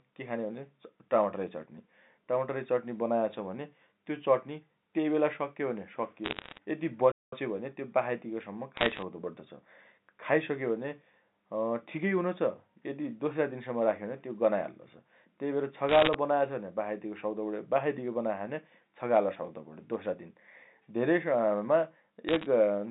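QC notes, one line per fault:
6.24–6.58 s, 8.77–9.02 s, 15.89–16.14 s, 22.29–22.46 s, bit errors on a digital phone line: short bursts of sharp ticks and crackle over the speech, with roughly 0.7 to 1 bit in a hundred corrupted. Each flipped bit in the 8-bit mu-law code throws a single sample to a wrong value, and hits on the sign or high bits give the loudest clicks. The waveform shows isolated one-sample spikes. The spectrogram shows thin vertical lines spanning the whole band up to the 4 kHz telephone ceiling.
7.12–7.33 s, playback stall: the sound drops to silence for about 206 ms mid-flow, then resumes. The likely cause is the player running out of buffered data or its output thread being blocked, so nothing was written to the device until it recovered. The waveform shows a dead-flat line with abrupt edges on both sides. The spectrogram shows a clean blank vertical gap across the 200–3700 Hz line band.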